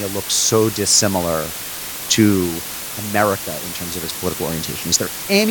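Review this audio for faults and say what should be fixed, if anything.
Low bit depth with dither runs through the whole speech clip. The audio has been reduced to about 5 bits, and dither was added before rounding, so the rounding error is spread evenly across the spectrum instead of clumping into harsh distortion. The result is a constant, even hiss that sits only about 10 dB below the speech, loud enough to mask quieter detail. To prevent it, keep at least 16 bits through every processing and export stage, and reduce bit depth only once, at final delivery.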